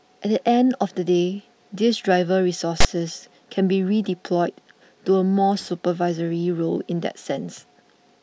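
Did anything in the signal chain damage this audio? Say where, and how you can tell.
Yes. At the storage and file-parsing stage, a block of text metadata was treated as part of the sample stream, so the file tags were played as audio. From 2.80 to 2.85 s, roughly 44 ms, the speech is interrupted by a loud, harsh rasp with abrupt edges. Text characters decoded as samples cluster in a narrow range of byte values, so the burst sits offset to one side of zero rather than centred like ordinary audio.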